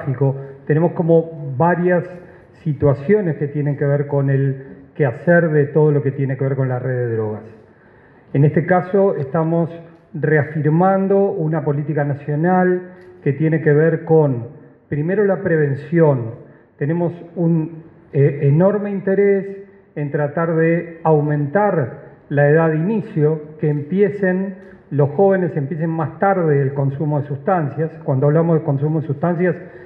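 No technical faults can be heard anywhere in the clip.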